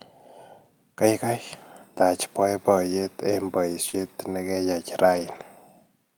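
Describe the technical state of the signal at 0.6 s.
At 0.6 s the speech signal is intact, with no audible dropout, clipping, distortion or other fault at that moment.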